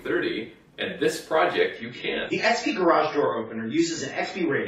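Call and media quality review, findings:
Adaptive stream at a lower bitrate, 1.76 s to end of clip. Sudden quality step with no gap. Content above 7.6 kHz gone, codec artefacts up. Stream player switched to a lower-bitrate rendition after throughput dropped, consistent with AAC going from roughly 96 to 16 kbit/s.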